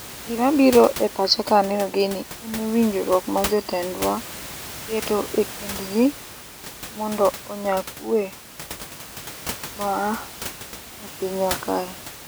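Nothing stood out on listening to this speech, apart from the room's own background noise sitting about 14 dB below the talker.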